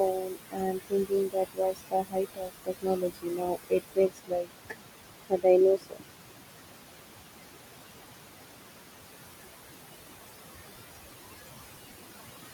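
Throughout the speech, the noise suppressor is treating the steady room noise, which sits only about 10 dB below the talker, as something to remove and pulls it down by about 20 dB frame by frame. These noise suppressor artifacts show up as a background that drops away in the pauses and surges back under each phrase.

From 0.11 to 5.46 s the suppressor misjudges parts of the speech itself as noise, and this speech cut by the noise suppressor adds up to around three seconds of affected sound, with the deepest drops reaching about 22 dB. Soft consonants and quiet word endings are dragged down along with the background, so they come across as swallowed or faint. The same thing happens again, more briefly, from 5.76 to 6.42 s, where a few tenths of a second are pulled down by up to about 22 dB.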